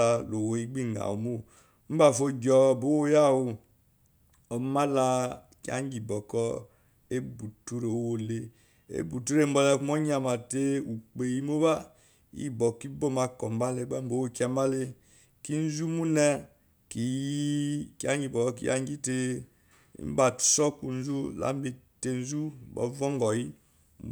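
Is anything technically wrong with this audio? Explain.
Yes. At 20.03 s the speech contains a case of dropped samples, most likely a momentary gap in the audio stream where a handful of samples were skipped, amounting to a small fraction of a millisecond. Because the waveform leaps straight from one value to a later, unrelated one, that discontinuity is far too brief to remove any audible speech, but it produces a single sharp click, visible as a thin vertical line across the spectrum.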